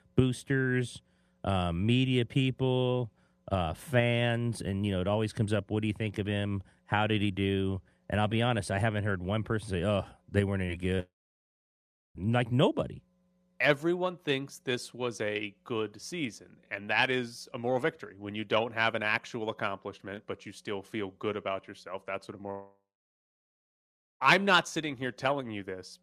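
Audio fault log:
10.65 to 10.70 s and 10.96 to 11.00 s, short concealed packet loss. About 20 ms of the call failed to arrive each time. The receiver bridged each gap by extending the sound just before it, then faded back into the real signal. So each spot comes across as a brief smear or wobble. A short consonant may drop out there. The two events sit about a quarter of a second apart.
11.00 to 12.17 s and 22.51 to 24.22 s, long network dropout. The sound cuts out for about 1.2 s and then about 1.7 s. Each gap starts with a short fading continuation of the last sound. Then comes plain silence, about 1.0 s in the first gap and about 1.4 s in the second. Speech resumes later, with the missing stretch simply gone. The likely cause is a network interruption.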